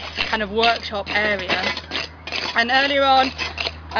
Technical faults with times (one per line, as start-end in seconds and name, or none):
none